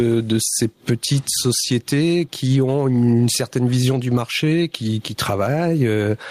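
Gain pumping runs through the whole speech clip. The likely cause is an input gain set far too high, with a fast limiter or compressor clamping down each time the talker gets loud and then releasing in the pauses. The level swings by something like 15 dB as a result. Loud and quiet passages sit unnaturally close together, leaving the speech squashed and breathing.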